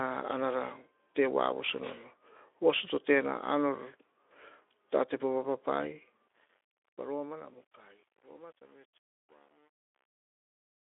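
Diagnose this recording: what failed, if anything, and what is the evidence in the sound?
Truncation distortion on a fade, in the gain stage: from 6.28 s the fading speech turns gritty, and from 7.08 s to the end it is at its grittiest, consistent with roughly 9-bit undithered steps.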